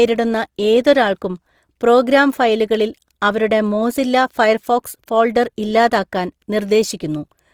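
Throughout, the speech sounds rough and grainy, with noisy, hissing texture in the highs, likely Opus compression in music mode at a low bitrate, around 24 kbps.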